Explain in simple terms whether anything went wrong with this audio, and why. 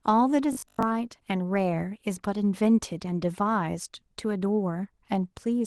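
Between 0.53 and 0.83 s the speech turns into a rigid, metallic buzz pitched at 50 Hz. This is robotic sound from repeated short buffers. New audio likely arrived too seldom, so a 20 ms snippet was replayed over and over, replacing most of that stretch.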